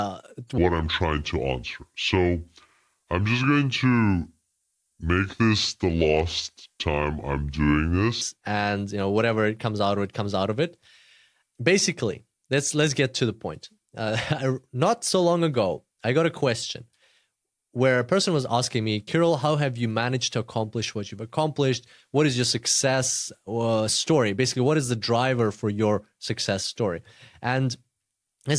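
Speech clip with a wrong sample rate from 0.58 to 8.21 s, just before "and you know whatever": the voice drops about 6.5 semitones and runs at 0.69 speed, which fits 32 kHz audio played at 22 kHz. On a spectrogram the harmonics and formants sit squeezed lower; the waveform looks stretched out in time.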